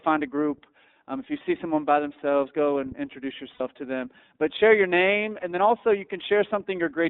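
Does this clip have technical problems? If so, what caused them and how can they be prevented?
Yes. The speech runs through the iLBC codec: the band is limited to about 250 Hz to 3.7 kHz, and each frame is coded independently, which suits iLBC's 30 ms mode. The result is plainly rough and synthetic, and a spectrogram shows nothing above 3.7 kHz. A wideband codec such as Opus would prevent this.

There are also lost iLBC frames at 3.54 to 3.61 s, after "themselves go and introduce", and at 5.40 to 5.44 s, after "share your name". In each gap the decoder repeats the last pitch cycle with added noise, giving a buzzy held vowel. On a waveform this shows as a periodic stretch. Recovery is immediate at "to them" and "then also you". Stabler networks, jitter buffering or forward error correction would prevent these losses.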